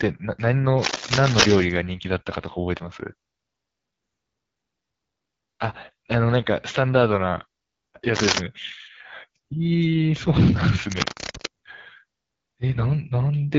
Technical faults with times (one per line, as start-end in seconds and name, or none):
0.00-13.59 AMR wideband (HD Voice) codec
0.78-1.64 cable scratch noise
8.15-8.40 cable scratch noise
10.91-11.46 cable scratch noise